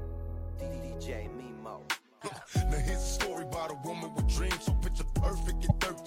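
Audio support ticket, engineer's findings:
Damaged data in compressed stream at 5.69–5.72 s. Brief glitch, about 26 ms, near end of clip. Component: input file or stream feeding the decoder. Mechanism: corrupted bytes in a frame. Decoder misreads the frame, loses sync, scans for the next valid header. Audio resumes after the resync point. Recommend checking the source file integrity and transport for byte loss or overwrite.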